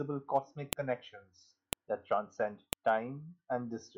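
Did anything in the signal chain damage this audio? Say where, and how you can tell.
Yes. The speech carries a file header played as audio, introduced where separate WAV pieces were joined or streamed for storage or playback. Sharp, loud clicks land at 0.73 s, 1.73 s and 2.73 s, exactly one second apart. They don't depend on the level or content of the speech around them. Each piece's header was left in place, so those few dozen bytes were read as sample values, producing a brief snap at every one-second boundary.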